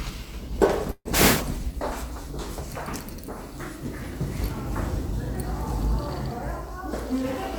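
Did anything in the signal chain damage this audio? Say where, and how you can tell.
Yes, a call audio freeze at the network and jitter-buffer stage, from about 0.91 to 1.08 s. The likely cause is packets held up in transit, leaving the receiver's buffer empty. The receiver stretches the last sound into a fading buzz or hiss for roughly 140 ms, ending in about 50 ms of silence. The sound then resumes exactly where it stopped, so nothing is lost, but everything afterwards runs about 140 ms late.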